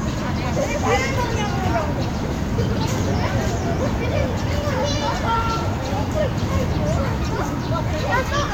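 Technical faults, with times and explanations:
No technical faults are audible: the sounds in the recording come through with nothing disrupting them.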